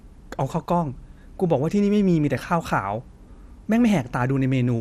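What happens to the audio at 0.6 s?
From 0.60 to 0.67 s the speech breaks into DAB burbling. Reception errors at a low rate, on the order of a tenth of a percent, have slipped past error correction into the audio data, corrupting samples across seven frames. Short blips of noise appear in single sub-bands over the voice. On a spectrogram this shows as scattered rectangular blocks of energy popping in and out of separate frequency bands.

Beneath that burst, and through the whole recording, the speech carries MP2 compression damage. The sound is plainly dull and gurgling, with a granular roughness. This is likely caused by MPEG Layer II coding at a low rate, which fits about 80 kbps. Too few bits forces upper sub-bands off and leaves the rest coarsely quantised. A spectrogram would show a ragged high-frequency ceiling, with bands flickering on and off in blocky steps.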